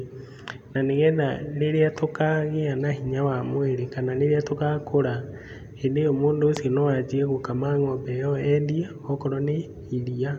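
No technical faults are audible.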